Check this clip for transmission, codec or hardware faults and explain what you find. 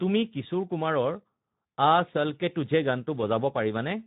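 One fault runs through the whole clip: the speech has the coarse, buzzy and hoarse grain of Speex codec damage, and nothing is heard above 3.8 kHz, so it sounds narrowband and dull. Speex is a CELP codec that models speech as a filter driven by an excitation signal. At low settings that excitation gets very few bits, which leaves this roughness. The damage is plainly audible and fits a low setting, around 11 kbps.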